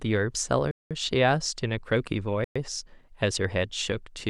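Bluetooth stall dropouts at 0.71 to 0.91 s and 2.44 to 2.56 s cut the speech to silence for about 195 ms and 113 ms, then resume. The likely cause is interference delaying wireless packets until the headphone buffer emptied and playback paused.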